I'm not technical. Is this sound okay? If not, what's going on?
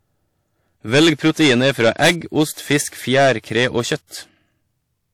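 No, there's hard clipping all the way through. The speech was pushed louder than the recording chain could carry, so its loudest moments got sliced flat, a few percent of the audio in all. Those flattened tops add a crackly, fuzzy edge on louder syllables.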